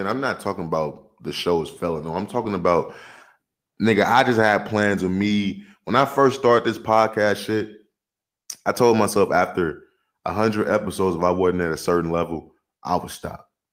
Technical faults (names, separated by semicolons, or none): none